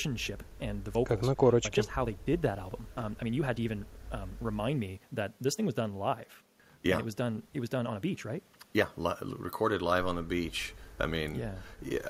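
Software appears to have squeezed the opening of this speech clip to fit a shorter length, likely by dropping short slices of audio so the pitch would hold. The result is a time-stretched section from 0.0 to 8.86 s, running at about 1.46 times normal pace: delivery sounds rushed, while pitch stays unchanged. At 8.86 s the pace drops abruptly back to normal speed.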